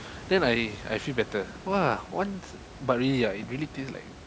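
No technical faults are audible.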